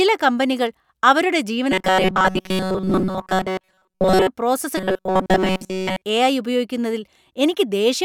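Speech with robotic sound from repeated short buffers after "കമ്പനികൾ അവരുടെ" (1.72–4.28 s) and again at 4.78–6.02 s: a 188 Hz metallic buzz, likely from looping roughly 5.3 ms buffers, showing as identical repeating waveform cycles and rigid evenly spaced spectrogram harmonics.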